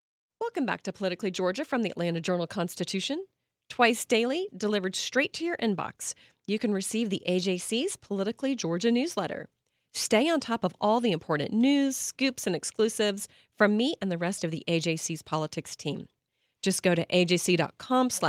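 From about 0.98 s to 3.37 s you can hear automatic gain rising: the gain control decided the input was too quiet and pushed its level up by about 4 dB over those 2.4 seconds, so the voice and background noise swell up together.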